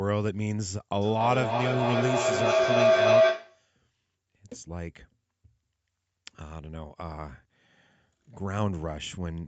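From 1.02 s to 3.71 s, a feedback howl takes over the speech: a microphone and loudspeaker on the same call are feeding each other, and each pass round the loop comes back louder. The sound narrows to a tone around 700 Hz, with the loop coming round roughly every 0.3 s, and peaks about 8 dB above the speech. Unlike an ordinary echo, whose repeats die away, these grow until the loop breaks.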